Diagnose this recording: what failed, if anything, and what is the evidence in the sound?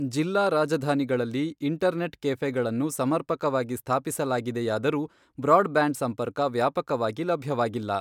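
Nothing here points to a failure at any stage of the chain, so there is no fault to report.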